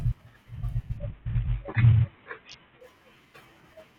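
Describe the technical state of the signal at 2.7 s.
At 2.7 s the speech is inside a Bluetooth SBC bit pool drop running from 0.97 to 2.81 s. The encoder has been starved of bits, which fits a bit pool cut from 28 to about 5, near 54 kbps. Upper sub-bands receive almost nothing and the rest are coarsely quantised, so the treble sounds dull and a gritty noise rides on the speech until the rate recovers.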